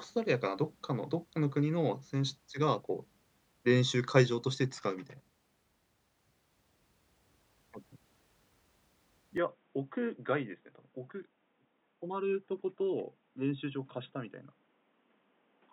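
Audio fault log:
9.38 s to 15.73 s, input switched to a poorer device. At 9.38 s the speech turns dull and boxy with no gap. Nothing above 3.8 kHz survives, so the sibilants and air vanish. The level falls by about 10 dB. A new background noise appears, sitting about 35 dB under the speech. The likely cause is a change of input to another microphone or a headset's call profile. That path passes a narrower band and has its own tone and noise.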